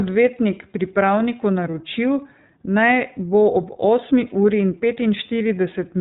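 Throughout, the speech passes through the iLBC codec at a rate that fits its 30 ms-frame mode. Nothing above 4 kHz survives, leaving a plainly rough, synthetic, narrowband tone.

At 1.71 to 1.74 s and 4.28 to 4.32 s, lost iLBC frames, each gap fitting one 30 ms packet, were concealed by repeating the last pitch cycle with noise. Each gap becomes a brief buzzy held vowel, then clears at once.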